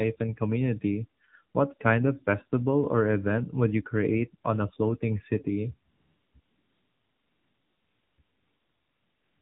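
The speech sounds muffled, buzzy and synthetic from start to finish, with nothing audible above 4 kHz. This is the AMR narrowband mobile codec, rebuilding the voice from a coarse vocal-tract model, and the plain damage fits a low rate around 7.4 kbps.

From 5.90 to 6.34 s, again from 6.40 to 8.18 s, and from 8.22 s to the end, the background becomes a smooth, even hiss that cuts in and out. This is AMR comfort noise: with no speech frames sent, the receiver generated synthetic noise in their place.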